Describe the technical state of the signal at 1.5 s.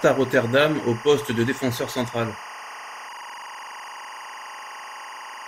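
At 1.5 s the speech carries timecode bleed, present throughout the clip: linear timecode at 23.976 frames per second leaking in from an adjacent track or cable, a chirping warble about 15 dB under the signal. A spectrogram shows steady bands near 1 kHz and 2 kHz alternating rapidly.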